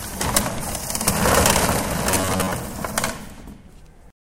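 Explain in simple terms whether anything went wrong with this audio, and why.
From 2.11 to 2.51 s the sound turns into a stiff, metallic buzz near 94 Hz. This is robotic sound from repeated short buffers. The likely cause is new audio arriving too late, so playback repeats a slice of about 11 ms for roughly half that stretch.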